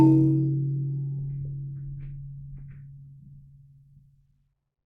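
Nothing in this bit of music catches the ear as a technical fault, so there's nothing to flag here.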